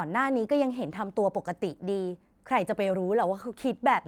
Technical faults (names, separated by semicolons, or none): none